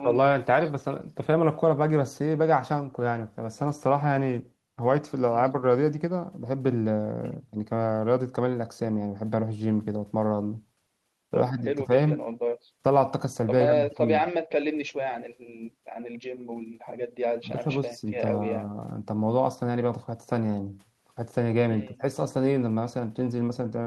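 Speech, no audible technical faults.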